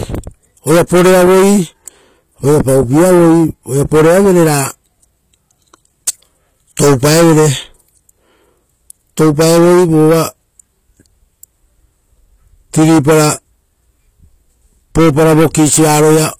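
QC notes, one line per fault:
Throughout: HE-AAC compression, plainly audible. The treble reaches high but is not the real top end of the speech. It is likely rebuilt by copying lower bands upward, so harmonics do not line up and s sounds turn gritty and lispy. This fits a bitrate near 24 kbps.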